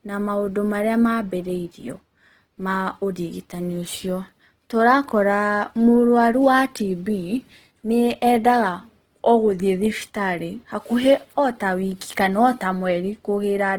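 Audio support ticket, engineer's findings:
Opus compression, throughout: speech grainy, rough, plainly audible. Starved bands noise-filled, bandwidth still full to 20.2 kHz. Likely CELT-mode encode, consistent with about 16 kbps.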